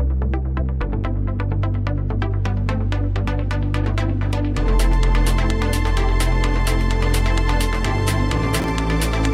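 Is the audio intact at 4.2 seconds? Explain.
Yes, at 4.2 seconds the audio runs through intact, with no dropout, click, distortion or other fault at that point.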